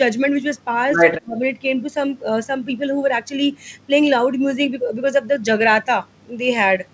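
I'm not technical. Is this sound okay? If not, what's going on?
No. Two problems show up early on. At 0.96 to 1.0 s there are chunks out of order. One tiny 20 ms slice of speech arrived late and played after the slice meant to follow it. Nothing is missing. The order is just swapped. That makes a brief jumbled blip.

From 1.11 to 1.41 s the speech suddenly dips sharply over about a third of a second. This is likely speech suppressed in double talk. Both sides spoke at once. The call's echo control couldn't tell this voice from the other side's sound, so it turned everything down.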